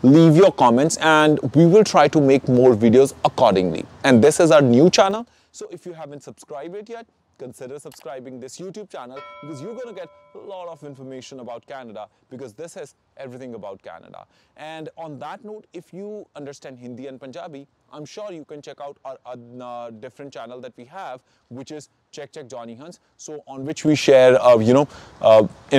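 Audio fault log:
4.99 to 5.34 s, zipper noise: the level drops by roughly 20 dB in steps of about 3 dB, around 20 per second, with no smoothing between them. Each jump is a small discontinuity in the waveform, so the fade is heard as a rapid ticking riding on the sound.
23.55 to 23.99 s, zipper noise: the same stepped behaviour in reverse, rising by roughly 20 dB in about 3 dB increments at around 15 steps per second. This gives a slightly slower zipping during the climb.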